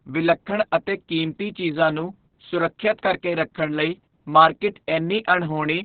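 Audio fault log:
throughout, Opus voice compression: the encoder appears to be running SILK at a very low rate, which fits roughly 6 kbps with long 60 ms frames. It narrows the band to narrowband and codes the excitation coarsely, so nothing survives above 4.5 kHz. The speech therefore sounds heavily muffled and boxy, with a hoarse, slightly robotic buzz where the coarse excitation replaces the natural breathiness and detail of the voice.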